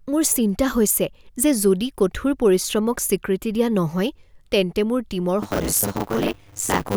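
From 5.42 s to the end, the speech takes on a robotic 100 Hz buzz from buffer tearing. Writer and reader pointers have drifted together, so roughly half of each 10 ms period replays audio about 40 ms stale, with hard joins either side.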